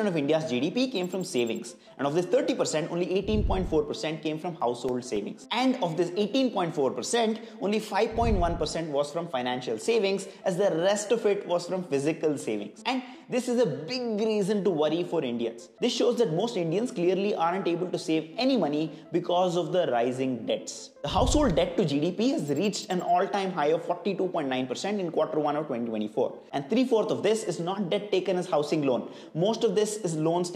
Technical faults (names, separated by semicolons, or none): CD scratch ticks